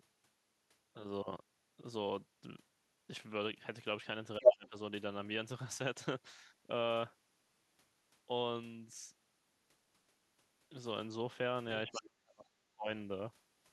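At 4.38 s the talker's speech sinks sharply, by roughly 25 dB at its deepest, and stays pulled down for about 0.4 s until 4.76 s. This is speech suppressed in double talk: both ends were talking at once, and the echo canceller, likely unable to tell the local talker from the loudspeaker echo, turned everything down together. Inside that dip, from 4.44 to 4.51 s, a brief scrap of the other side's voice leaking through can be heard, standing out well above the muted talker, which points to echo the canceller failed to remove from the microphone.

The same pattern returns more severely from 11.85 to 12.88 s. The speech is held down for about a second and drops by roughly 35 dB at worst, so it nearly vanishes. Between 11.88 and 12.02 s the far-end voice again bleeds in as a short fragment, this time sitting about 10 dB below the talker's speech level. Both effects likely arise because the suppressor could not separate the two voices during simultaneous talk.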